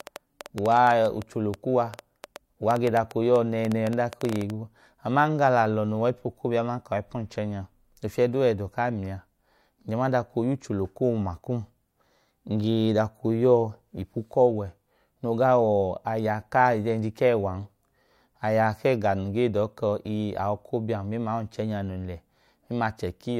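From the very start to 4.51 s, a train of clicks ticks and pops over the speech at about 7.8 per second, unevenly spaced, some forty in all, and peaking well above the voice. Interference from nearby equipment or a faulty connection or power supply is the likely source.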